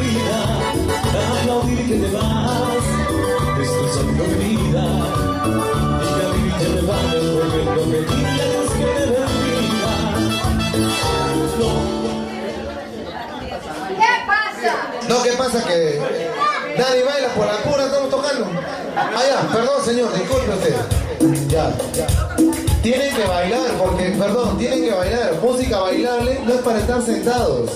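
Nothing stood out as a technical fault on listening through the audio.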